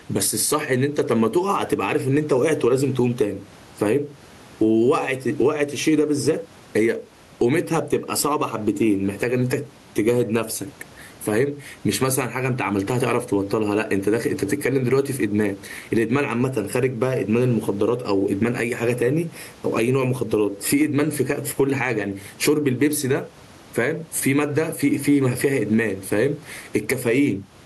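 Gain pumping runs through the whole speech clip. The room noise sits about 37 dB below the speech. The swing is around 15 dB. The likely cause is input gain set far too high, with a fast limiter clamping it down.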